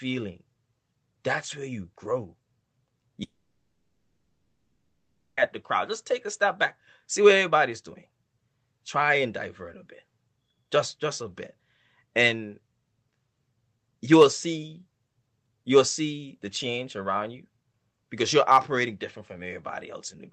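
At 3.23 s the speech breaks into a fading buzz that carries the last sound onward, then gives way to silence. Speech resumes at 5.39 s on "at the crowd". This is likely a long network dropout, and about 2.1 s of audio is simply lost.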